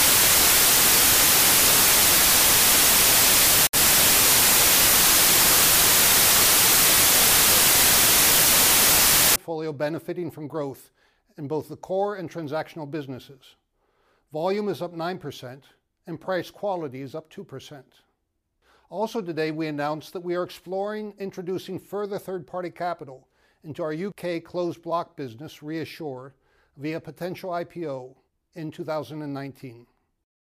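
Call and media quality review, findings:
Decoder assembling samples from the wrong bytes, 0.00–9.36 s: byte offset, swapped order or misaligned read in the sample reader or format parser. Fast-changing low bits land in the high-order position, so the sound becomes loud broadband noise, close to white on loud passages. Normal from 9.36 s.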